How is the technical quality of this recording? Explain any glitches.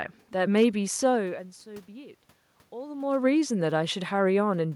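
The recording has one brief glitch, a short burst of hard clipping. The background room noise and the level shifts near 1 s and 3 s, where the talker moves relative to the microphone, are not faults.

Hard clipping occurs from 0.57 to 0.65 s. The speech peaks overshoot the stage's limit by about 2 dB and are sliced flat, adding high harmonics heard as a quick crackle. Unlike a talker moving closer, which makes the sound louder but clean, clipping adds a gritty distortion.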